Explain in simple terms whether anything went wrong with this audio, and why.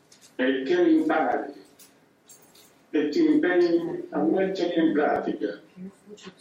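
Two brief glitches occur, at 1.32 s and 5.16 s, each lasting only a few milliseconds. Both come from damaged data in a compressed stream. At those points a small stretch of the stored audio data was corrupted, so the decoder could not read it properly. It lost its place and had to find the next valid block before continuing. That disruption comes out as a short blip or chirp in the sound.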